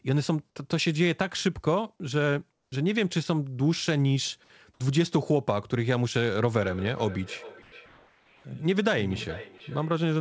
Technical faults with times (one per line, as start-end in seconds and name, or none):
2.52-2.72 comfort noise in place of the background
6.60-10.17 feedback echo between two devices
7.62-8.44 comfort noise in place of the background
9.58 sound dropped by the voice detector